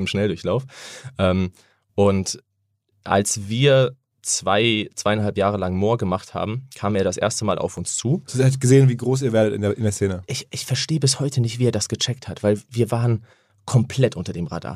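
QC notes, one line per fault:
7.77 s, block of digital silence: a 1.45 ms dropout, which fits a 64-sample block going unfilled or being computed as invalid values, heard as a tick rather than a gap. The waveform shows a brief flat stretch, and the spectrogram shows a thin vertical broadband line.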